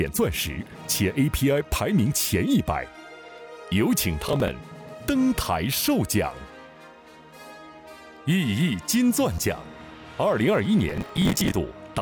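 Processor overload crackle appears at 4.29 to 4.48 s and again, longer, at 10.89 to 11.53 s. Roughly 10 ms buffers miss their deadlines in runs, each filled with stale audio, so hard-edged repeats stack into gritty tearing that stops once the load clears.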